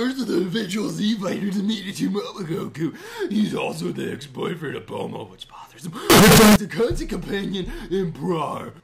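There's one problem in this audio, and it's hard to miss: from 6.10 to 6.56 s the sound turns into a blast of very loud, harsh, almost square-wave signal sitting at a nearly fixed, high level, with the quiet background brought right up to the same level as everything else. That's the float read as integer fault, likely caused by 32-bit float samples being read as 32-bit integers, so the sign and exponent bits end up setting the level instead of the actual waveform.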